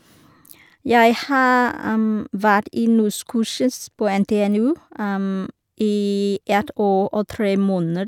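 No technical faults are audible anywhere in the speech.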